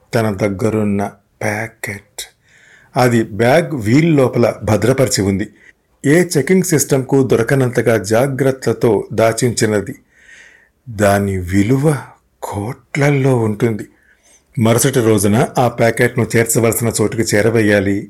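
From start to finish, the speech is marred by hard clipping. The signal was driven about 7 dB past what one stage in the chain could pass. The loudest peaks hit that ceiling and were sliced flat. Those flat tops create harmonics high in the spectrum. Only a small share of samples, under one percent, are affected. So the fault is heard as brief crackle and grit on the strongest syllables rather than constant fuzz.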